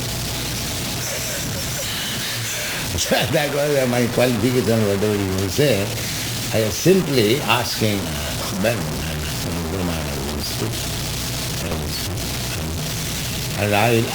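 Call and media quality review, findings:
Grainy, signal-following distortion throughout, noise only about 5 dB under signal; likely low bit depth without dither, 4-bit truncation. Waveform shows coarse staircase steps; spectrogram shows broadband hash tracking level.

Garbled flutter at 10.28–10.38 s and 11.63–11.73 s: frames out of order, two 40 ms blocks swapped. Waveform shows three abrupt discontinuities.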